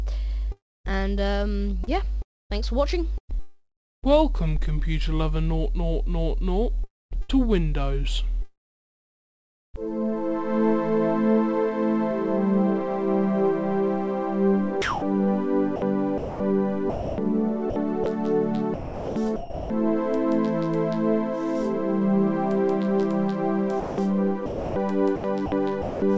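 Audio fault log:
0.52–7.47 s, 6.84–7.31 s, 14.82–19.70 s, 23.80–26.02 s: sound chopped by the voice detector. Parts of the sound drop out and synthetic comfort noise replaces them, about 0.76 s, 0.35 s, 1.6 s and 0.82 s in total. The sender's detector likely switched transmission on and off repeatedly.
3.39–4.05 s, 8.42–9.76 s: long network dropout. About 0.64 s and 1.32 s of audio never arrive. The receiver stretches the last sound into a fading fill, then silence for about 0.37 s and 1.2 s. Audio resumes later, with the lost part gone. A likely cause is a network outage.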